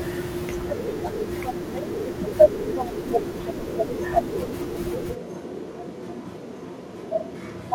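At 5.17 s the speech suddenly turns roomy and hollow, about 5 dB quieter, with room noise near 30 dB below it, to the end. A switch to a distant microphone is the likely cause. The waveform steps down; the spectrogram thins below and smears reverberantly.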